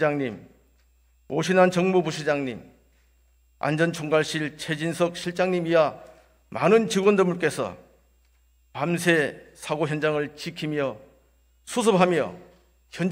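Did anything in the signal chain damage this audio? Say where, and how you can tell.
No, the signal chain caused no damage.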